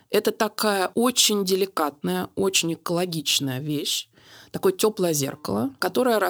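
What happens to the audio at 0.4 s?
Nothing goes wrong at 0.4 s: the speech continues intact there, with no dropout, click, distortion or other audible fault.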